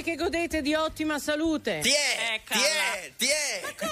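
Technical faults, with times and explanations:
1.84 to 3.92 s, pre-emphasis left on: from 1.84 s to the end, the treble lift applied before recording or transmission is never undone by the matching de-emphasis on playback, and the curve's shape fits J.17. The top end stays raised, with 10 kHz sitting about 11 dB above 1 kHz, so the audio turns thin, bright and sibilant, its high frequencies overbearing the lower range and the hiss-like content pushed forward.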